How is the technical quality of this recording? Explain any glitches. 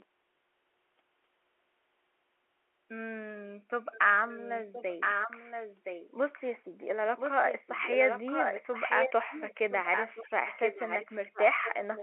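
The recording is marred by an echo leak: a second copy of the speech trails the original by 1.02 s. It appears faintly, well below the speech, for the first 0.05 s. It returns almost as loud as the speech itself from 3.92 to 6.61 s and again from 7.16 s to the end. This is likely a far-end speakerphone whose echo canceller let its own microphone pickup slip back down the line. The narrow 300 Hz to 3.4 kHz G.711 telephone band can be heard on both copies.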